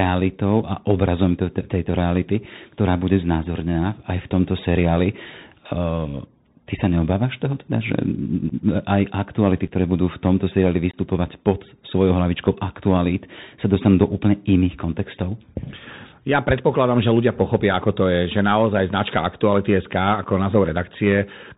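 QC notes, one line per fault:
Throughout: Bluetooth CVSD headset codec. One-bit delta coding at 64 kHz cuts everything above 4 kHz. S sounds turn scratchy and a granular hiss sits underneath.
8.49–8.52 s, 9.68–9.72 s (after "aj aktuality"), 10.91–10.97 s, 13.75 s: unconcealed Bluetooth headset packet loss. Short hard-edged gaps, 7.5 ms each, except 22.5 ms at 10.91 s, around three packets, before "pod svojou hlavičkou aktualít". The speech returns briefly quieter.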